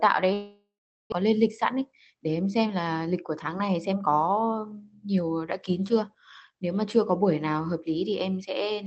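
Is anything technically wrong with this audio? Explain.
Yes, there are three problems in this speech clip: one long gap and two stretches where the audio gets hurried.

From 0.33 to 1.14 s there's a long network dropout. The audio carries on as a buzzy, fading continuation of the last sound, then thins out to near silence for about 0.4 s before the speech returns. About 0.6 s of the original is simply gone, so the talker jumps ahead. The likely cause is a run of packets that never arrived, with the receiver filling the hole as best it could.

Then there's jitter buffer speed-up, twice: 1.74 to 2.29 s at about 108% speed, and 3.06 to 4.44 s at about 109%. After that hiccup the receiver was sitting on more buffered audio than it wanted, so it trimmed tiny pitch-period-sized slices over and over, about 50 ms in total in the first stretch and about 150 ms in the second. Pitch stays put, but the speech sounds rushed.

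The top end stops around 8 kHz, which fits the Opus call path the audio went through.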